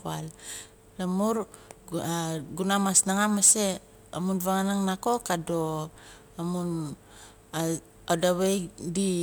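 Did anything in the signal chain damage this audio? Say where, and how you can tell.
Yes. Between 2.74 and 3.62 s the speech shows hard clipping, with the signal driven about 11 dB past what a fixed-ceiling stage, such as the converter input or a fixed-point format conversion, could pass. Every loud stretch there turns to harsh fuzz. On a waveform the peaks sit sliced flat against the same level. On a spectrogram dense harmonic energy smears up into the high kHz range across that span, because those flat tops generate harmonics.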